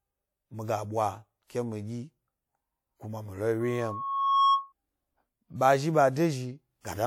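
From 3.60 to 4.73 s a loudspeaker feedback squeal rises over the speech: the microphone is hearing the loudspeaker it feeds, and at 1.1 kHz the loop gain exceeds one, so that tone keeps reinforcing itself. It swells over roughly the first 0.7 s to around 5 dB above the speech. On a spectrogram it appears as one bright horizontal line at 1.1 kHz; the waveform shows a steadily widening sinusoidal envelope.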